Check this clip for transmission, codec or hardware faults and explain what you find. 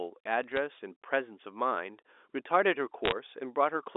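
Two bursts of bit errors on a digital phone line, carried over G.711 mu-law telephone coding, whose 300 Hz to 3.6 kHz band fits a 64 kbps line.

The first burst runs from 0.44 to 0.57 s at a low error rate, around 0.15 percent; the second, denser one runs from 3.05 to 3.12 s at roughly half a percent. Each flipped bit corrupts a single 8-bit sample. Where it strikes an upper bit, or the sign of a loud sample, the logarithmic scale turns it into a large jump, heard as a sharp tick. Together they form brief crackle over intact speech. On a waveform these appear as isolated one-sample spikes; on a spectrogram, thin vertical broadband lines reaching the band edge.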